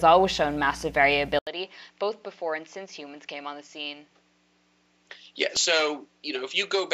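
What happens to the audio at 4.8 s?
From 4.86 to 5.80 s, CD scratch ticks: a disc blemish defeats error correction once per revolution, giving five brief clicks or micro-dropouts, the longest about 2 milliseconds, seen as thin vertical lines on the spectrogram. Throughout, since 1.39 s, the sound stays dull and about 10 dB quieter, likely because the input switched to a poorer device; the spectrogram shows nothing above 7.6 kHz and a new noise floor roughly 40 dB down.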